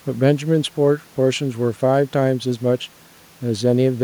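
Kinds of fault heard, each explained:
No technical faults can be heard in this speech recording.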